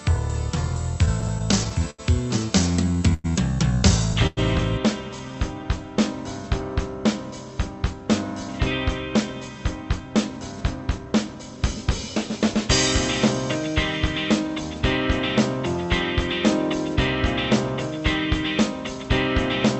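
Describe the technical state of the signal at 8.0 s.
A jitter buffer speed-up runs from 7.69 to 12.10 s, so 8.0 s falls inside it. The receiver, holding more audio than it wanted, repeatedly cut out pitch-period-sized slices, around a third of a second in total, so the sound plays about 5% faster at unchanged pitch and feels slightly hurried.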